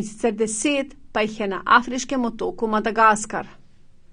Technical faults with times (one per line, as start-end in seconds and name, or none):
0.00-4.12 AAC compression